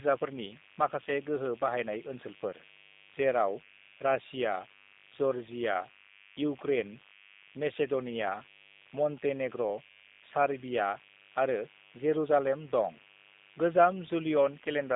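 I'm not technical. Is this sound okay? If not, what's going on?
No. Two problems run through the whole clip.

The first is mains buzz, a steady, raspy noise at 50 Hz sitting quietly under the speech from start to finish. Electrical interference from the power supply causes it. It is gritty and edged, not a smooth, soft hum, because sharp electrical spikes add many higher tones on top of the 50 Hz base.

The second is G.729 codec damage. This low-rate internet-phone system rebuilds the voice from a simplified model. Everything above about 3.8 kHz is gone, so the speech sounds thin and boxed-in. Unlike an ordinary phone line, the voice itself also sounds clearly rough and slightly artificial.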